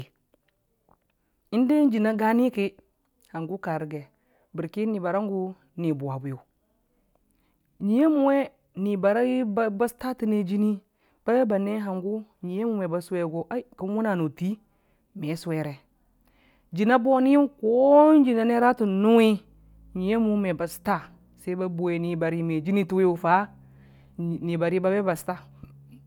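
Nothing technically wrong turns up anywhere in this speech recording, so there's no fault to point to here.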